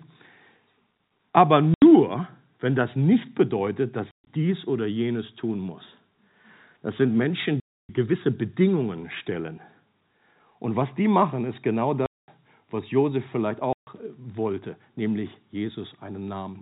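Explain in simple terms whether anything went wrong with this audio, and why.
Packet loss filled with silence cuts the speech into holes at 1.74–1.82, 4.11–4.27, 7.6–7.89, 12.06–12.28 and 13.73–13.87 s. Chunks went missing in transit and got replaced with nothing. The gap lengths fit 10 ms packets. The phone-style G.711 coding is working as intended.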